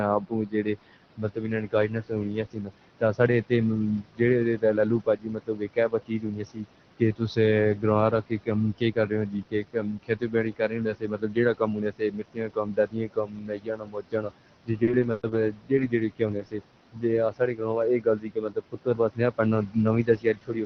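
Speech, about 21 seconds long, carried over a WebRTC call path whose Opus codec cuts everything off above 6 kHz, at a coding grain that fits a bitrate around 20 kbps, with steady room noise sitting about 16 dB under the voice. Noise suppressor artifacts run through the whole clip. The suppressor pulls the bands it judges to be steady noise down by about 18 dB frame by frame, so the background drops away in the pauses and swells back under each phrase. On a spectrogram the gaps between phrases turn dark and speckled with isolated flickering dots rather than an even haze, and the waveform's floor pumps up and down with the speech. The same processing also produces speech cut by the noise suppressor, from about 0.2 s to the end: soft consonants, word tails and quieter stretches are mistaken for noise and turned down with it, by about 19 dB at the deepest, so they sound swallowed. The spectrogram shows high-frequency consonant energy thinned or missing and syllable endings clipped off early, and the waveform shows decays that collapse too abruptly. 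At 14.83 to 14.90 s there is a short stall from a late packet: a packet arrived late, the jitter buffer ran dry, and the receiver held the last sound for about 40 ms before resuming where it left off, with nothing lost. It is heard as a briefly frozen sound, visible as harmonics stretched into flat horizontal bands. Around that point come six instances of a lost packet rebuilt from error correction, each 60 ms long: 14.87 to 14.93, 14.99 to 15.05, 15.17 to 15.23, 15.29 to 15.35, 15.77 to 15.83 and 16.37 to 16.43 s. Each lost packet was replaced by the low-bitrate copy carried in the following packet, so there is no gap, but those frames sound rougher and noisier, and appear as grainier, more smeared patches in the spectrogram. At 15.11 to 15.20 s there is a burst of packet loss: the receiver extended the last sound for about 60 ms while fading it out, then jumped ahead, so 60 ms of speech is gone. 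This is visible as repeated, dimming stripes followed by a sudden change in spectral shape and a discontinuity in the waveform envelope.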